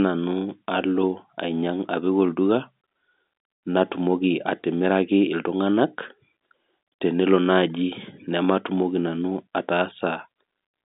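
Nothing in this speech clip is technically wrong. It is carried over G.711 telephone coding, so the sound is confined to the narrow line band of roughly 200 Hz to 3.7 kHz, with at most a faint trace of the codec's level-following quantisation noise.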